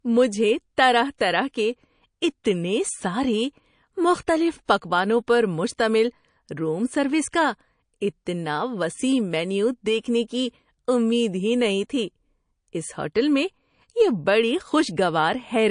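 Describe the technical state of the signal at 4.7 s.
At 4.65 to 4.69 s, between "کے اتنے سارے مختلف" and "پکوانوں پر", there is pre-echo: a 35 ms smear of hiss, about 21 dB above the quiet floor, arriving just before a sharp speech onset. The codec's quantisation noise was spread across the whole transform block, so it leaks into the silence ahead of the attack, and the onset sounds soft. The roughly 52 ms window fits a long block with no switch to short blocks. On a spectrogram it shows as a broadband smudge before the onset's vertical edge. On the waveform, low-level fuzz rises ahead of the transient.

Across this moment, as throughout, the speech carries plainly audible MP3 compression, likely from a low bitrate near 40 kbps. Weak frequency lines flicker in and out, giving a watery, swirly texture. A spectrogram shows patchy holes.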